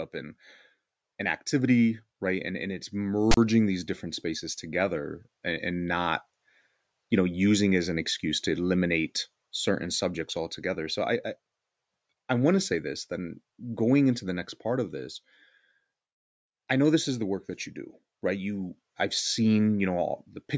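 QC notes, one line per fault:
3.31 to 3.37 s, file tags played as audio. Right after "and it's" and before "these different spaces together", a 60 ms burst cuts in with hard edges. A block of text tag data is read as if it were samples. The character bytes make a loud, buzzy rasp pushed to one side of zero. The zero padding decodes as a short stretch of dead silence. Then the sound resumes abruptly.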